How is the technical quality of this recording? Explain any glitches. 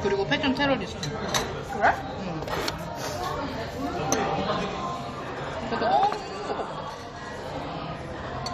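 The recording has one clear fault in its second half.

From 4.65 s to the end at 8.54 s there is channel delay (doubling). One channel runs about 92.9 ms late, which fits a 4096-sample buffer, and summing to mono turns every sound into an equal-level double, like a single slap echo.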